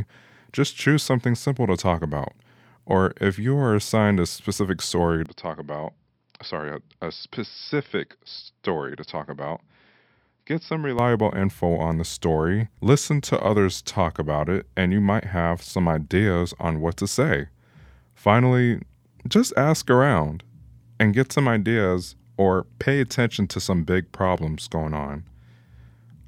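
From 5.26 to 10.99 s, after "assigned a specific story", the speech loses everything above 5.5 kHz, turns slightly quieter and gains a faint new noise floor. That points to an input switched to a poorer device, likely, rather than simple filtering.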